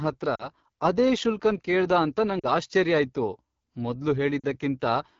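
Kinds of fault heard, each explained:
AMR wideband (HD Voice) codec: the speech is coded at a very low AMR-WB rate, likely about 8.85 kbit/s, so the whole clip sounds rough and raspy.
Lost AMR speech frames: radio errors wiped out about 40 ms of speech three times, at 0.35, 2.39 and 4.40 s. Each time the decoder bridges the gap with a brief fade to near silence before the sound returns weak or rough for a moment.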